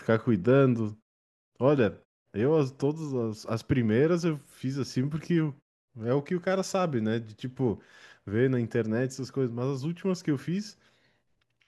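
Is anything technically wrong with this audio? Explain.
No, nothing is technically wrong with this audio.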